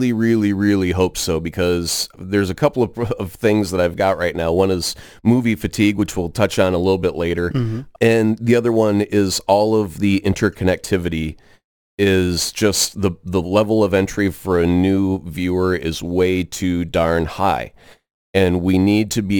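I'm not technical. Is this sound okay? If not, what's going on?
No. All the way through, the speech carries a gritty fizz that rides on louder and brighter sounds. That is crude rate conversion: the audio was converted to a new sample rate by simply repeating samples, which leaves harsh stray tones.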